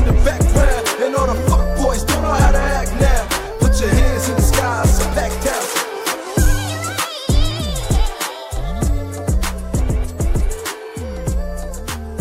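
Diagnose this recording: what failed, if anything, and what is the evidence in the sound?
Hard clipping occurs from 5.77 s to 6.51 s, where the sound turns harsh and gritty on its loudest moments. The signal was driven about 4 dB beyond what a stage in the chain could pass, most plausibly the converter or a gain stage ahead of it. The peaks were sheared flat at that stage's limit, and those squared-off tops generate high-order harmonics that are heard as crackling fuzz riding on each peak for that span.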